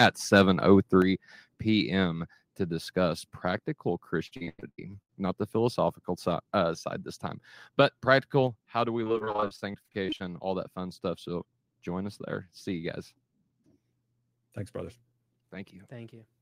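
Microphone overload opens this speech recording at 0.00 to 0.06 s and again at 0.35 to 0.41 s, where the loudest peaks push roughly 5 dB and 3 dB past the converter's limit. Their tops are flattened against the converter's ceiling, so a small share of samples is squared off and those syllables take on a harsh, crackly edge, the likely result of the input volume being set too high. Microphone volume stepped down follows at 1.02 s, with the whole signal, voice and background together, dropping about 5 dB in one abrupt step shortly after those distorted peaks. A second step of about 3 dB comes at 8.47 s, just after "side this time but". These sudden level drops are likely the call software reacting to the hot input by cutting the device gain. Repeated packet loss (robotic sound) affects 4.27 to 5.14 s, between "to discuss practical" and "not the philosophical uh". Nine dropouts, the longest 99 ms, are patched by stretching the preceding sound, so nearly half of that stretch is synthetic fill that sounds choppy. 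The same fault returns from 9.04 to 10.22 s, between "do we" and "all that fun stuff", as seventeen shorter holes of up to 40 ms. About 30 percent of that span is concealed, which gives a rapid, choppy stutter.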